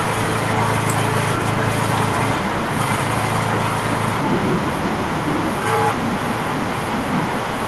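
Throughout the speech, an echo with no canceller trails every phrase. The far end's loudspeaker feeds its own microphone, and nothing removes that pickup. Each phrase returns about half a second later. The copy is about 12 dB quieter and thinner.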